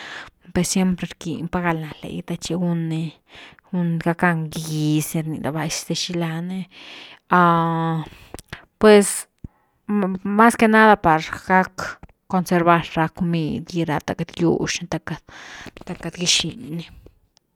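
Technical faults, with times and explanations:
Nothing stood out as a technical fault on listening to this speech recording.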